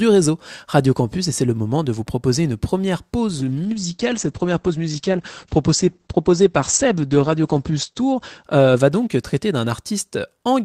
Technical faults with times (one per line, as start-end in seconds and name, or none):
3.39-10.61 call bitrate drop